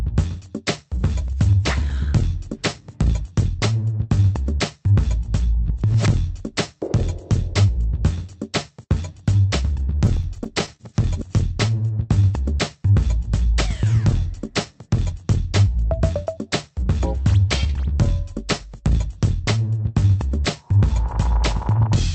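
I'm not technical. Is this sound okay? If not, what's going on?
No. From 9.95 to 10.8 s there are repeated stalls (stutter). The sound briefly catches and drags nine times, as data arrived late. Nothing is lost.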